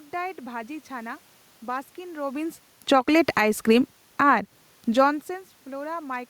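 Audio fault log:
2.76 to 3.53 s, automatic gain falling: The level sinks by about 4 dB over roughly three quarters of a second, and the room noise behind the speech drops with it. The gain control judged the input too loud and pulled its gain down step by step. Because the whole signal is scaled, speech and background fade together rather than the speech alone.
2.99 to 4.73 s, automatic gain rising: Starting while the fall is still under way, the sound swells back by about 4 dB across about 1.7 s, and the room noise climbs along with the speech. Here the gain control judged the input too quiet and raised its gain slowly, so the recovery is a gradual swell rather than a jump. Near 4.5 s the talker also moves relative to the microphone, which shifts the speech level on top of this slow rise.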